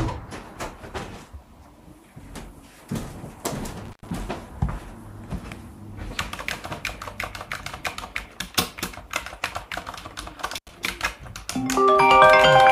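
An everyday-sound recording with two intermittent-contact faults, where a loose cable or plug briefly breaks the signal path. The first spans 3.85 to 4.11 s, with the line open for about 102 ms. The second runs from 10.54 to 10.69 s, open for about 87 ms. Each cut-out is bracketed by crackle as the contact scrapes, and faint hiss remains during the gap. A digital dropout, by contrast, would leave clean silence with abrupt edges.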